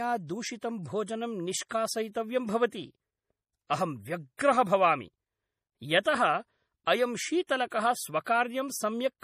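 From the start, the speech carries plainly audible MP3 compression damage, which points to a low bitrate of around 40 kbps. Nothing is heard above 15 kHz, so the top end is cut flat. The encoder had too few bits for the detail. It dropped weak frequency lines, and they flicker on and off between frames. The result sounds watery and swirly. Sibilants turn metallic and chirpy, and attacks smear.

From 0.21 s to 9.16 s, clock slip clicks tick at a steady pace, about every 0.4 s. That comes to roughly 30 ticks. Each one is a single sample dropped or repeated. The likely cause is two devices running on separate, unsynced clocks that differ by around 70 ppm. Each time the drift adds up to a whole sample, the stream jumps and a tick is heard.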